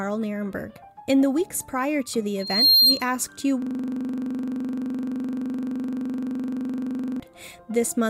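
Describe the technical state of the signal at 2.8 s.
At 2.8 s the signal is caught in a loudspeaker feedback squeal, running from 2.39 to 3.04 s. A microphone is hearing the loudspeaker it drives, and at 4.2 kHz the loop gain passes one, so that frequency feeds on itself into a piercing single tone around 10 dB above the programme. Unlike a steady interference whine, which arrives at full strength, this tone swells up over roughly a third of a second before it stops.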